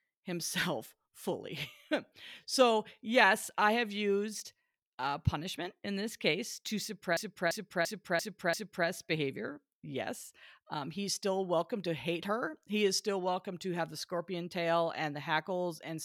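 A system hang loop interrupts this speech recording. From 7.17 to 8.88 s, the computer or audio driver stalled while the sound hardware kept replaying its ring buffer. The same 341 ms slice of speech repeats exactly five times at about 2.93 Hz, which fits a 16384-sample buffer. With a buffer this long, the result is a skipping-record effect repeating about three times per second rather than a buzz, and when playback resumes, practically no audio is missing.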